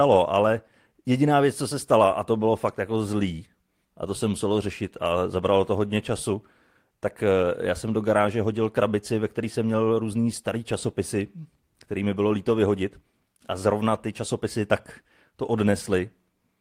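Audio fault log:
No faults heard anywhere in the speech recording.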